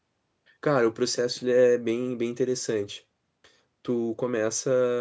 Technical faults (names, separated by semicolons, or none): none